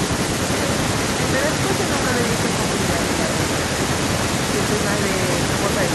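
Speech clip, and two things stand out. Right at the start, from 0.07 to 0.52 s, the voice dips hard, down by something like 30 dB, for roughly 300 ms in total. That's likely speech suppressed in double talk, where the echo canceller mistook the talker for loudspeaker echo and squashed it. Then from 2.35 to 5.19 s there's a delayed copy of the voice trailing about 0.84 s behind, sitting roughly 10 dB under the direct speech. That's an echo leak, with the likely cause being a far-end canceller letting its loudspeaker pickup slip back into the call.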